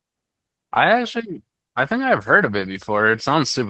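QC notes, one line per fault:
No faults to note; the speech comes through its WebRTC call path as expected.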